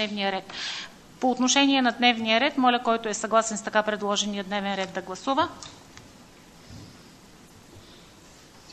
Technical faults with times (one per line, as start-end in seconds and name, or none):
7.46-7.50 damaged data in a compressed stream